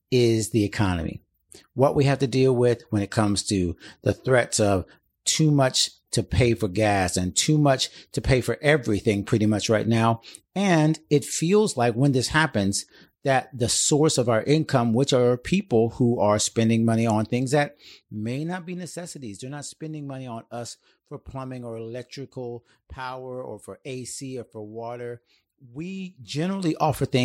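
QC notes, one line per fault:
17.36–18.92 s, zipper noise: Right after "are spending money on" the level drops by about 15 dB, but it moves in tiny stair-steps, each a fraction of a dB, at around 30 per second. Each jump lands unsmoothed and leaves a small click, so you hear a fine ticking riding on the speech during the fade.
25.96–26.84 s, zipper noise: Same fault in reverse. The level climbs back about 15 dB in steps of about 1 dB, again around 30 a second. Each step again leaves a small click, so the ticking rides on the speech until the level settles.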